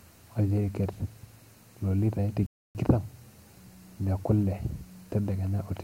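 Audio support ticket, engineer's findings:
Speech cuts to full silence at 2.46 s, resumes at 2.75 s; gap about 286 ms, hard edges. Likely Bluetooth stall: headphone buffer ran dry while interfered packets were resent. Distinct from a codec dropout: one clean silent gap, no warbling, smearing or repeated fragments around it. Wireless link suspect.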